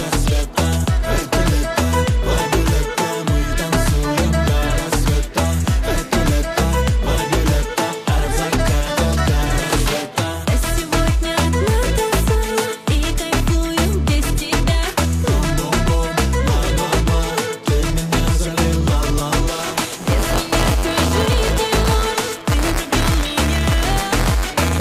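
Buffer tearing from 19.57 s to the end: writer and reader cross inside each 256-sample-sized buffer, splicing in a small slice of audio about 15 ms old, producing a steady 188 Hz robotic buzz.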